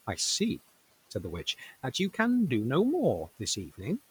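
From 0.59 to 2.96 s there's a stretch of GSM signalling bursts: a nearby 2G phone sounds like it's signalling, and the audio circuit rectifies its radio pulses into a galloping dit-dit-dit of short 217 Hz buzzes, roughly 20 dB under the speech.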